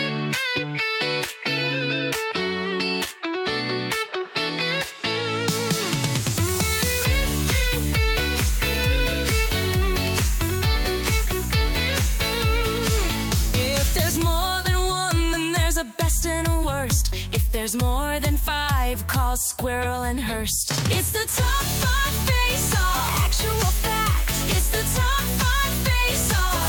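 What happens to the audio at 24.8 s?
Nothing goes wrong at 24.8 s; the audio there plays through intact, with no dropout, click, distortion or other fault.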